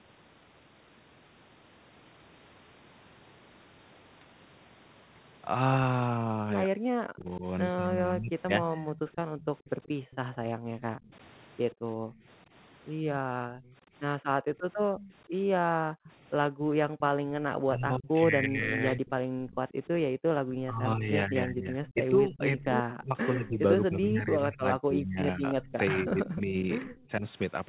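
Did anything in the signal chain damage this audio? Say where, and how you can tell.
Yes, it's all in the call-processing stage. Speech suppressed in double talk shows up from 6.66 to 8.92 s, with dips of about 40 dB covering roughly a second and a half. It comes back from 17.64 to 27.25 s, shallower at about 25 dB but around five seconds in total. The likely cause is the echo canceller mistaking the talker for far-end echo and ducking both.

Echo leak follows. A copy of the voice trails by 131 ms, at about 25 dB under the speech from 8.94 to 10.16 s, then about 20 dB under from 13.65 to 27.03 s. That steady delay looks like a loudspeaker echo path that the canceller likely never fully modelled, so residue went back down the line.

The background is gated by the echo canceller from 10.32 to 20.28 s. The room tone drops by up to about 40 dB, adding up to roughly three seconds of dips, then recovers each time the canceller releases. 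That's the suppressor clamping the mic while the speaker plays. The 4 kHz ceiling from the G.711 leg is normal narrowband behaviour, not part of the damage.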